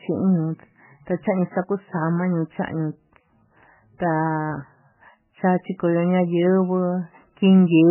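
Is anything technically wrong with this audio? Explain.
Yes. Throughout the speech there is heavy damage consistent with MP3 compression, most likely from a very low bitrate around 9 kbps. With so few bits, the encoder discards all content above 3 kHz and zeroes weaker frequency lines that then flicker between frames. The result sounds muffled, watery and swirly, with smeared consonant onsets. A spectrogram would show a hard, flat ceiling at 3 kHz and patchy, blocky gaps below it.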